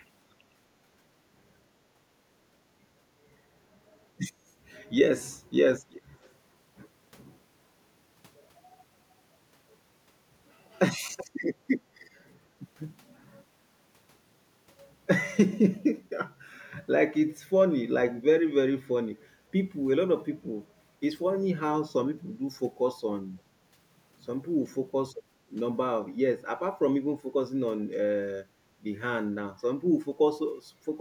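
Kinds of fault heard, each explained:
Background gated by the echo canceller: at 0.54–1.0 s, 1.93–2.04 s and 3.78–3.92 s the room sound dips by about 8, 11 and 15 dB, then returns. The canceller pulls the microphone down hard while the loudspeaker plays.
Echo leak: at 5.9–6.02 s, 6.23–6.32 s, 11.17–11.25 s, 12.02–12.07 s and 12.26–12.33 s, short scraps of speech repeat 376 ms late, roughly 15 to 40 dB down. A far-end loudspeaker's echo likely slipped past its canceller and was sent back.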